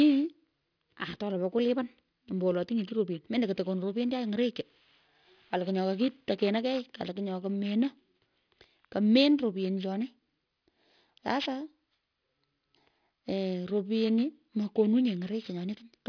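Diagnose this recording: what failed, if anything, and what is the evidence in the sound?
Aliasing from a faulty sample-rate conversion runs through the whole clip. Sibilants sound gritty and metallic, with energy packed hard against a 5.5 kHz ceiling, which fits a drop to about 11 kHz without an anti-alias filter. Folded components sit roughly 20 dB below the speech. A properly filtered downsample would simply roll off cleanly instead.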